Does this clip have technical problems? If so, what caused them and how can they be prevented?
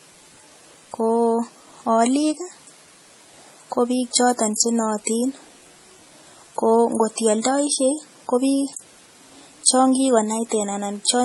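Yes. Throughout the speech, smeared MP3-style swirling is layered under HE-AAC's metallic high-band sheen, with nothing above 11.9 kHz. This is likely transcoding between lossy codecs; a single codec leaves only one artefact type. Encode once, from the original source.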